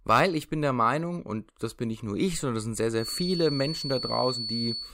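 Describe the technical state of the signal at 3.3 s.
At 3.3 s a feedback whistle is present. It begins at 2.94 s, just after "sondern das sind sehr", and lasts to the end of the clip at 4.94 s. A thin, steady tone near 4.4 kHz sits roughly 10 dB below the speech, swelling and fading slowly in level. The cause is likely a loudspeaker-to-microphone loop held just at the edge of instability, sustaining that single frequency without building into a runaway howl.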